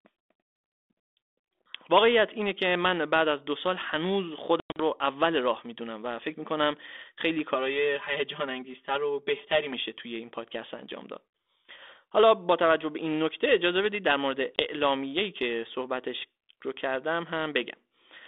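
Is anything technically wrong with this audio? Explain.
Yes. From 4.6 to 4.81 s the speech breaks into hard-edged silent gaps, 140 ms lost in all, the longest about 100 ms, then returns slightly distorted. This is packet loss on an ADPCM call, roughly seven packets' worth. The decoder's predictor and step size lose track of the sender's and need tens of milliseconds to recover. A single 20 ms dropout at 14.56 s, about one packet, does the same on a smaller scale.

Between 7.54 and 9.73 s the sound turns hollow and phasey. This is channel delay (comb filtering): one channel lags by roughly 5 ms, and summing the channels to mono cuts evenly spaced notches, starting near 100 Hz.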